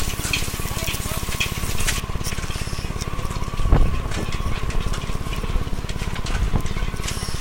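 From 0.0 to 2.0 s the sound has pre-emphasis left on. A treble boost applied before recording or transmission was never undone by the matching de-emphasis, so high frequencies stand out: around 10 kHz the level sits about 13 dB above 1 kHz. The shape of the lift fits a 75 microsecond FM pre-emphasis curve. For those two seconds the sound is thin, bright and sibilant.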